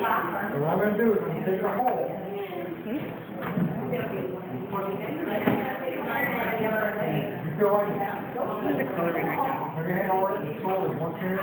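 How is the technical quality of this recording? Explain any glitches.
The recording has one fault that runs throughout: imaging from sample-and-hold upsampling. Raising the rate from 16 kHz to 48 kHz by repeating samples left mirrored spectra, the first from 8 to 16 kHz about 22 dB down, adding a metallic fizz that tracks the sound.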